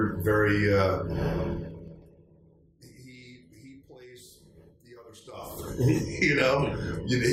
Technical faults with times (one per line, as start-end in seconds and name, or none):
1.49-2.22 zipper noise
5.21-5.72 zipper noise